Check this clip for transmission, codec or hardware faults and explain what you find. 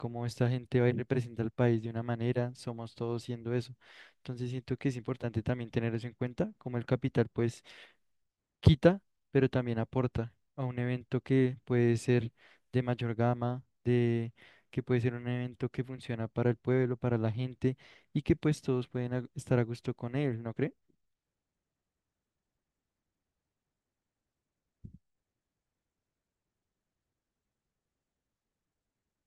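Nothing in the speech here suggests any transmission, codec or hardware trouble, so there's nothing to flag.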